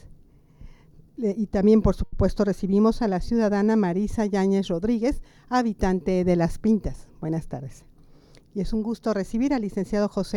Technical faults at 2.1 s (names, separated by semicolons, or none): short stall from a late packet